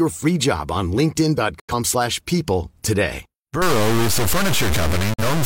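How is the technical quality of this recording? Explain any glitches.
The technical quality is poor, with two short signal dropouts and heavy grainy distortion through the final stretch of this speech recording.

Digital broadcast dropout, at 1.59 to 1.73 s and again at 5.13 to 5.23 s. The receiver stopped getting usable frames and muted until clean data returned. Each gap opens and closes with a very quick fade of about 8 ms. The first gap loses about 85 ms of speech, which fits two missing frames, and the second loses about 43 ms, consistent with one. Whatever was said in those moments is simply gone.

Low bit depth without dither, from 3.62 s to the end. The audio turns coarse and gritty, with a rasping distortion that rises and falls with the speech and breaks up the quieter parts. The likely cause is the signal being truncated to only about 3 bits with no dither to smooth the steps. 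The rounding error therefore tracks the waveform instead of sitting underneath it as steady hiss, and it comes out roughly as loud as the speech itself.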